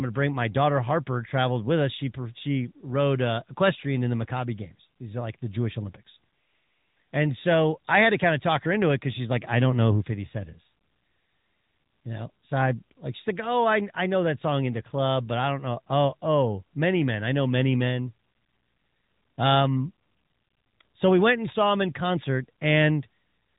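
The AMR narrowband mobile codec runs throughout the speech: nothing passes above 3.8 kHz, and vocal-tract modelling, which fits around 10.2 kbps, leaves the voice plainly buzzy and synthetic.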